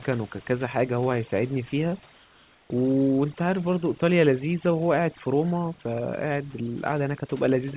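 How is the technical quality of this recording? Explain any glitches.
The recording has two audible faults: heavy-handed noise suppression across the whole clip, and a short stretch where the background is swapped for synthetic noise. Everything sits below 4 kHz, which fits narrowband G.711 telephone coding, and the room noise lies about 31 dB under the speech.

Overdone noise removal runs from start to finish. The suppressor was set so aggressively that any frequency band close to its noise estimate gets pushed far down or removed outright, and the quieter parts of the speech go with it. The result is speech over a near-silent background flecked with twinkling artefacts. On a spectrogram, the gaps between phrases show scattered isolated specks instead of a continuous noise floor, and the speech harmonics look ragged at their edges.

Comfort noise in place of the background appears from 2.14 to 2.70 s, replacing 560 ms of the real background. 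The most likely cause is discontinuous transmission. The sender's voice detector judged the audio silent and stopped sending it, and the receiver filled the gap with generated noise shaped roughly like the background. The natural texture turns into a flat, steady hiss, about 3 dB quieter than the real background, which sits about 34 dB below the loud speech. A spectrogram shows a uniform smooth band there, and the waveform shows an even, low-level fill.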